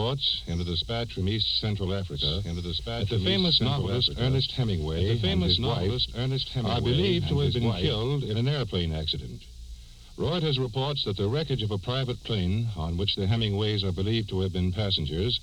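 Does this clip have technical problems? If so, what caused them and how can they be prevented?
Yes. From 2.15 s to 8.07 s there is a doubled audio track: a second full-band copy of the sound trails the original by about two seconds, roughly 5 dB quieter. It switches on and off abruptly and has no decay or room colouring, which sets it apart from an echo or reverb tail. The likely cause is the same source being captured twice, once through a slower path, or an edit leaving two offset copies. Monitoring a single capture route and checking edits for overlapping duplicates would prevent it.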